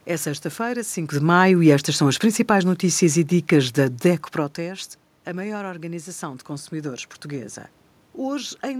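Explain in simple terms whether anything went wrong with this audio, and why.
Between 1.13 and 4.34 seconds there is automatic gain falling: the recorder judged the input too loud, or its background noise too strong, and slowly turned itself down, so the speech and the room noise behind it sink together, separate from the talker's own movements near 1 and 4.5 seconds.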